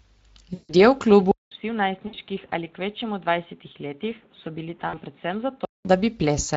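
Throughout the speech there is a grainy, hoarse coarseness with a noise-like quality, plainly audible from start to finish. This is the Speex codec at about 20.6 kbps. Speex is a CELP coder that rebuilds speech from a pitch model and a spectral filter. At this rate it has too few bits to describe the excitation cleanly, so the fine structure of the voice turns rough.

From 0.53 to 0.75 s the sound smears into a stretched sound that fades away. This is VoIP packet loss concealed by the speech codec. About 160 ms of audio went missing, which fits eight 20 ms frames. The decoder kept repeating its last pitch and filter settings with falling gain. Because each concealed frame builds on the one before, the voice stays weak or distorted for a short while after the packets return.

At 1.31 s the sound drops out for about 200 ms. It then returns dull, roughly 10 dB quieter, with nothing above 3.8 kHz and new background noise sitting around 30 dB below the speech. 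This lasts until 5.85 s, when the fuller sound returns. The likely cause is the input switched to a poorer device, one with a narrower band, its own noise and a lower level.

Within that stretch, two shorter packet losses of about 60 ms each occur, at 2.07 to 2.15 s and at 4.87 to 5.00 s. Each gives the same brief stretched smear and fade, as the decoder extrapolates from its last frame before the stream resumes.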